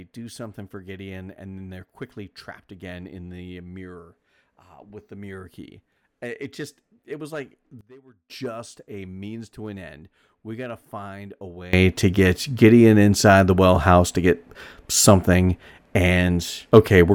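A digital gain setting was likely applied with no ramp, causing two sudden gain jumps in this speech. At 7.81 s, after "just it was like", level and background noise drop about 20 dB, returning at 8.30 s before "a means to an"; at 11.73 s, after "got to find a", both leap about 22 dB through to the end.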